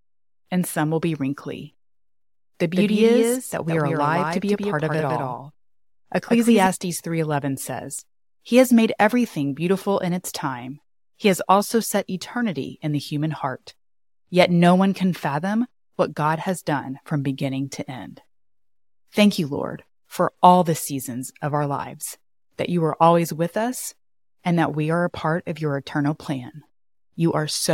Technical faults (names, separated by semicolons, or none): doubled audio track